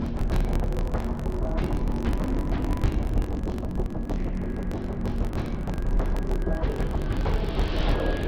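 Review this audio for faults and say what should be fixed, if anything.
Interleaved audio read as planar runs through the whole clip. Each block of alternating left and right samples is split in half, the first half treated as left and the second as right, so both channels play at half speed in parallel. The sound drops a full octave, comes out doubled, and chops at about 47 Hz, a 21.33 ms block period that fits a 1024-sample buffer. To prevent it, make sure the reader's declared sample layout matches the buffer's actual interleaved format.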